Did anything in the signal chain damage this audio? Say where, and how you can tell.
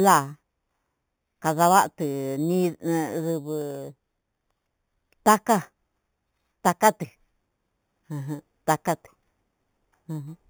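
Yes. A bright, metallic fizz rides on the speech for the whole clip, about 15 dB below it, filling 4 to 8 kHz and moving opposite to the voice's pitch. This is imaging from sample-and-hold upsampling at the sample-rate conversion stage: samples were repeated without smoothing, which fits an 8 kHz source raised to 48 kHz.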